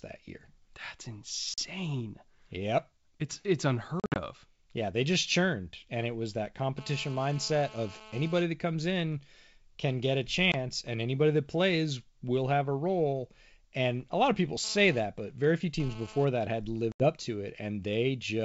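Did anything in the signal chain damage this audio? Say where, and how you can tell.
Yes. At the network stage there is packet loss on an ADPCM call, with hard-edged silent gaps at 1.54–1.60 s (40 ms missing), 4.00–4.20 s (120 ms lost in pieces across 160 ms, the longest gap 60 ms), 10.52–10.55 s (20 ms) and 16.92–17.07 s (80 ms). The gap lengths fit 20 ms packets. After each hole the decoder's predictor and step size no longer match the sender's, so the speech comes back slightly distorted, then settles within tens of milliseconds.

In the analogue wiring there is GSM phone buzz, a hard, raspy 217 Hz tone rich in harmonics at about 19 dB below the speech. From 6.78 to 8.42 s it holds steady, which points to a nearby 2G phone on a call. From 14.64 to 16.25 s it comes and goes, which fits the same phone transferring data. The audio circuitry is rectifying the phone's burst transmissions, which is why the buzz has no relation to the speech. 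The G.722 wideband coding carries the speech out to 7 kHz.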